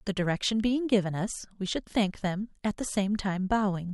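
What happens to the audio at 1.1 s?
Nothing goes wrong at 1.1 s; the speech carries on intact through that moment, with no dropout, click or distortion to be heard.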